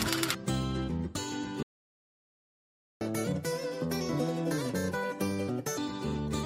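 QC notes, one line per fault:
1.63–3.01 s, playback stall: the sound just cuts out mid-flow and there's dead silence for about 1.38 s before anything comes back. That gap is what you get when the player has nothing to hand the output, most likely because its buffer ran dry or its playback thread got held up. The silence runs from the drop-out right up to the moment the catch-up kicks in.
3.01–5.78 s, catch-up at higher speed: once audio resumes, it's running at 1.5x. Everything's hurried and pitched up by roughly seven semitones, so it has that sped-up, chipmunk-ish lift. The player is resampling its backlog to claw back the time it lost in the stall, and since resampling shifts speed and pitch together, both jump. At 5.78 s it settles back to normal speed and pitch.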